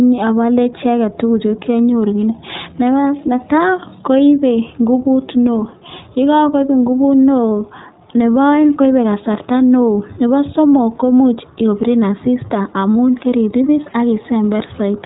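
Throughout, the speech sounds dull, rough and faintly synthetic, with nothing above 3.8 kHz: plainly audible iLBC codec damage, fitting its 15.2 kbps, 20 ms-frame mode.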